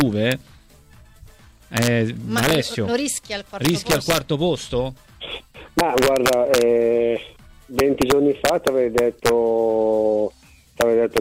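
The sound is marred by integer overflow: on its loudest passages the sample values run past the top of the integer range and wrap to the opposite sign instead of being held at the limit, so every overshooting peak snaps across full scale as a harsh crack, far sharper than clipping. It occurs at 0.01–0.32 s, 1.77–1.87 s, 2.38–2.55 s, 3.65–4.18 s, 5.79–6.61 s, 7.79–9.29 s and 10.81–11.18 s, with the signal pushed about 1 to 4 dB past the limit.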